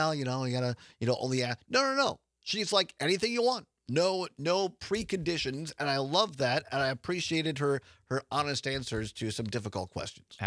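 No technical faults can be heard anywhere in the clip.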